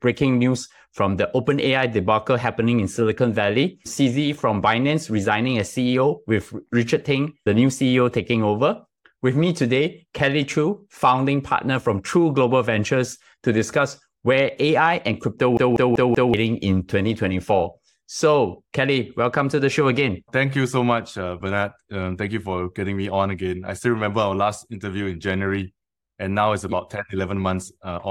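At 15.57 s, just after "and crypto", the speech sticks like a CD stuck on one turn. A scratch knocks the laser back one track. The same 191 ms slice plays four times, each with a brief mute, until 16.34 s. It sounds like a rapid, even stutter.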